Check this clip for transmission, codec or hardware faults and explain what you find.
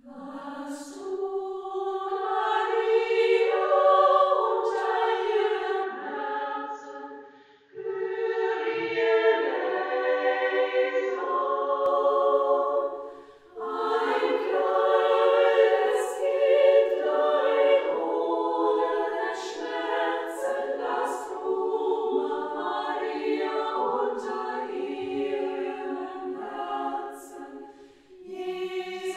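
One fault is present: from 5.83 to 11.86 s the input likely switched to a poorer device. Its narrower band cuts everything above 6.9 kHz, so the sound turns duller and a few decibels quieter, with a faint new noise floor. A spectrogram shows a flat ceiling at 6.9 kHz; the waveform steps down in level with no gap at either switch.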